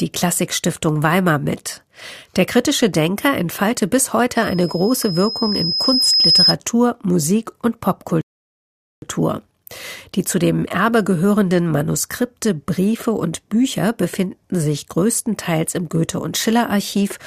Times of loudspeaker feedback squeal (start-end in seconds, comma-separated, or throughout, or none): 4.35-6.56